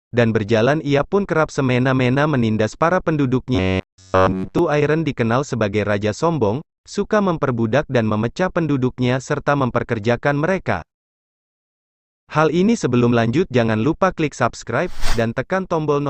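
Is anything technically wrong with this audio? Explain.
Yes. From 3.55 to 4.59 s there is robotic sound from repeated short buffers. Across that stretch, the audio turns into a rigid, metallic buzz at about 93.8 Hz. The likely cause is fresh audio arriving too slowly, so playback loops the last short chunk instead. The buzz frequency points to a chunk of roughly 10.7 ms. Nearly all of this stretch is repeated material, so the skipped audio is simply lost.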